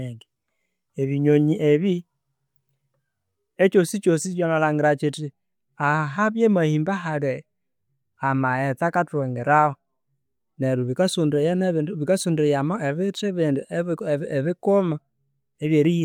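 Nothing here calls for comment, since the speech runs along without any technical fault turning up at any point.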